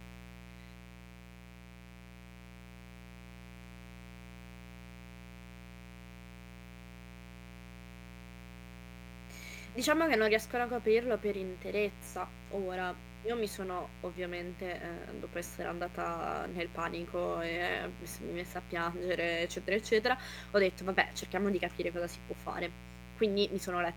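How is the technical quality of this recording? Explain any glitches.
The recording is marred by a constant fault. Mains buzz runs through the whole speech clip. Switching spikes at twice 60 Hz add harmonics reaching several kHz, making a steady, raspy buzz about 15 dB below the speech level.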